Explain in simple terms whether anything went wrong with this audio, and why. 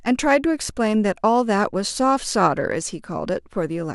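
Nothing went wrong with this short speech recording, because no technical fault can be heard anywhere in it. Listening all the way through, nothing stands out that would need explaining.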